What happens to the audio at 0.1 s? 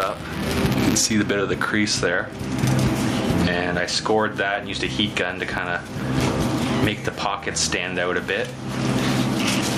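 Buffer tearing runs from the start of the clip to 1.13 s, so it is present at 0.1 s. The writing side and the playback side of the ring buffer have drifted and cross within every period. A small slice of each buffer, a few percent, still holds audio from the previous lap, about 10 ms old, with hard joins on either side. This produces a robotic 200 Hz buzz that rides on the sound.

Gain pumping is also present at 0.1 s, as it is across the whole clip. The gain swings by about 20 dB. Loud and quiet passages are pressed close together, so the sound feels squashed. The likely cause is input gain set far too high, with a fast limiter or compressor clamping down on every peak.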